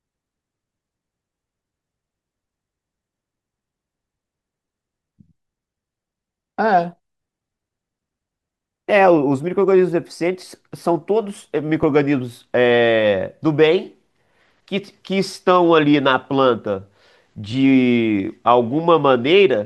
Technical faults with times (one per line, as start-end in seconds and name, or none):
11.83 underrun with held sample
17.52 underrun with held sample